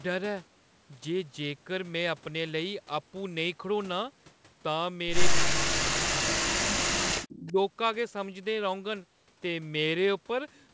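At 5.38 to 5.44 s a short echo leak appears. A scrap of the far side's voice comes back about 228 ms late at only about 5 dB below the speech, likely because the far end's echo canceller let its loudspeaker sound through. It differs from reverberation because it is a distinct, delayed copy rather than a smeared tail. Fainter scraps, about 15 dB down and with the same 228 ms lag, return at 6.6 to 6.65 s and over 7.15 to 7.52 s. That fixed delay is what identifies them as echo.

From 5.45 to 7.08 s the talker's own speech is suppressed in double talk. While both sides overlap, the voice drops out in pieces, adding up to roughly a second, with the deepest dips near 40 dB, likely because the canceller could not separate talker from echo and turned both down. A shorter, shallower dip of about 15 dB follows at 7.39 to 7.57 s. Unlike packet loss, these are level ducks that track the overlap rather than abrupt gaps or glitches. 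The top end stops at 8 kHz throughout, as expected for a G.722 call.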